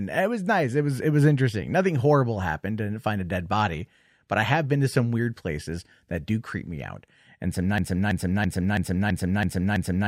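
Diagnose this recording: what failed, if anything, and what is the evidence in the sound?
Broken-record loop from 7.78 s to the end: a roughly 0.33 s fragment of the speech repeats exactly, back to back, about seven times. Likely cause is a stalled player or stream buffer resending its last chunk, so whatever came after is gone.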